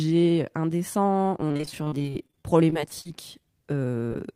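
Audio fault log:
1.37–3.07 s, repeated packet loss (robotic sound): 24 separate gaps, none longer than 40 ms, break up the speech. Each is bridged by extending the preceding sound, so about 27% of this span is concealed, about 460 ms in all. The result is choppy speech with pieces missing.
1.82–3.46 s, jitter buffer slow-down: the receiver stretched the audio by about 99 ms to rebuild its reserve, repeating pitch periods and pause fragments. Speech runs at 94% speed with unchanged pitch, so sounds are drawn out, overlapping the lossy stretch.
4.08–4.12 s, short concealed packet loss: about 20 ms of audio arrived too late to decode. The receiver continued the last sound to fill 25 ms, then blended back into the real signal, leaving a brief smear or wobble.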